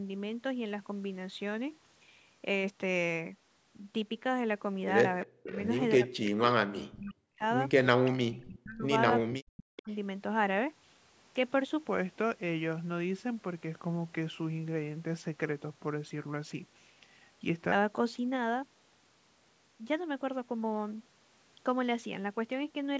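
From 5.32 to 5.61 s and again from 5.97 to 7.44 s, the speech dips sharply, by roughly 40 dB at its deepest. This is speech suppressed in double talk. The echo canceller likely could not separate the local talker from loudspeaker echo while both sides spoke, so it turned everything down.

Inside that stretch, at 6.26 to 6.31 s and 7.02 to 7.07 s, brief echo leak appears. It is a copy of the voice 363 ms late, about 15 dB and about 30 dB below the speech. Residual loudspeaker echo likely slipped past the canceller and returned.

Longer echo scraps follow at 8.05 to 8.45 s and 9.76 to 9.96 s. Both sit about 20 dB down, with the same 363 ms delay.

Suppression returns at 8.24 to 8.88 s and 9.2 to 9.89 s. The speech again dips, with drops near 40 dB. In both places a double-talk clamp is the likely cause.

From 11.86 to 17.72 s, a section at the wrong speed plays at 0.833 times normal. Pitch falls about 3 semitones, so the voice sounds deeper and slower. 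Playback against the wrong clock is the likely cause.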